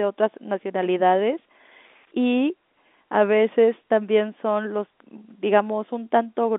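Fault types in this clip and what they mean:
No technical faults are present: the speech sits within an ordinary telephone band of roughly 250 Hz to 3.6 kHz, and any coding noise from that channel is faint at most.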